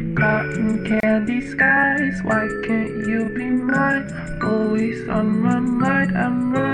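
A brief dropout of about 31 ms at 1.00 to 1.03 s, with smeared edges, is a gap at a join of encoded pieces, left by untrimmed encoder delay and padding.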